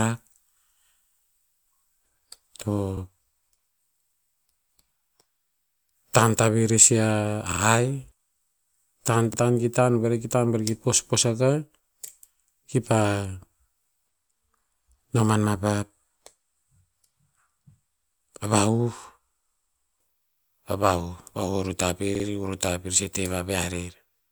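At 7.52–7.62 s, 9.33–9.38 s (before "ta ki") and 22.15–22.25 s, late audio caused a repeated buffer, a stutter of repeated 46 ms blocks that shows as identical waveform blocks with hard vertical seams.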